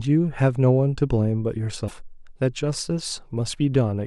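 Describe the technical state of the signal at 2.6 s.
At 2.6 s the speech signal is intact, with no audible fault.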